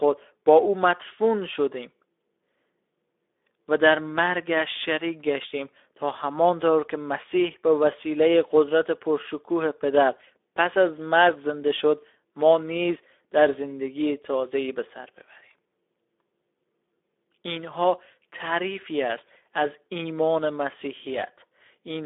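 Speech carrying audible Speex codec damage from start to finish: a hoarse, noisy CELP texture, with content confined to roughly 300 Hz to 3.6 kHz and an empty spectrogram above 3.8 kHz, consistent with a low-rate setting around 11 kbps.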